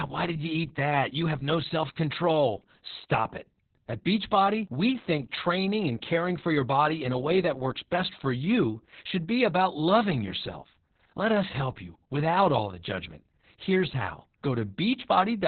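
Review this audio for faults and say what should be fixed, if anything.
Heavy Opus voice compression runs through the whole speech clip. Nothing survives above about 4.3 kHz, so the sound is narrowband, muffled and hoarse, with a robotic edge. The coarse excitation points to the SILK coder at a very low rate, near 6 kbps. Prevent it by encoding at a higher bitrate with wideband or fullband enabled.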